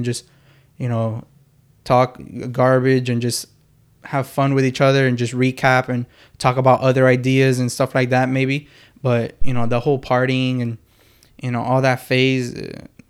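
At 9.42 s, right after "like that maybe but", a phantom power thump breaks into the speech and lasts until 9.90 s, when "partying and" resumes. A supply was switched on or off on a live input, and the voltage step passed through the coupling capacitors as a deep thud. It peaks at about -6 dBFS and dies away in roughly 108 ms. The waveform shows a large, slow, one-sided swing that tails off, and the spectrogram shows a dark block of energy confined to the low frequencies.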